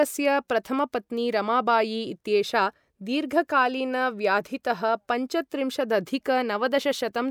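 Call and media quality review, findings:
No faults heard on this speech clip.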